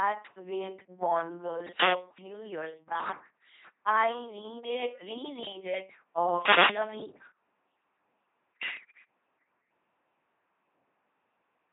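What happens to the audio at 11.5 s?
At 11.5 s the speech still carries the LPC-10 vocoder damage present across the whole clip. Each instant is rebuilt from a pulse train or noise through a ten-pole filter, which fits 2.4 kbit/s coding, giving a buzzing, robotic voice with nothing above 3.8 kHz.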